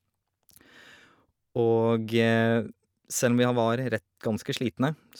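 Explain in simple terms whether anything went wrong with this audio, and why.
Nothing went wrong with this recording that a listener can pick out. The speech carries on steadily with no breaks, jumps or sudden changes in the sound.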